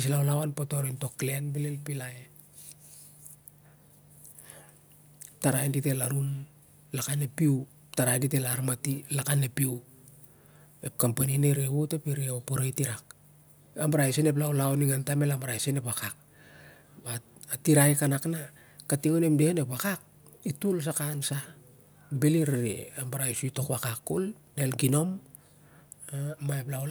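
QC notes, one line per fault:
No faults detected in this clip.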